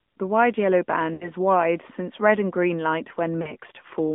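Throughout, the speech sounds boxed-in and buzzy, with a thin, synthetic edge and nothing audible above about 3.5 kHz or below about 150 Hz. This is the AMR narrowband mobile codec. The audio was squeezed into an 8 kHz mobile channel and rebuilt from a compact vocal-tract model excited by a few pulses, which fits the 10.2 kbps AMR-NB mode. The artificial, buzzy character is plainly audible.

From 1.14 to 1.33 s the speech smears into a held, warbling tone, fades away, and then returns weak and rough. From 3.42 to 3.54 s a shorter version of the same stretch and fade occurs. These are lost AMR speech frames: corrupted frames were thrown out. The decoder carried the last good pitch and spectral settings forward at falling gain. This covered about 60 ms at the first spot, which fits three 20 ms frames, and about 40 ms at the second.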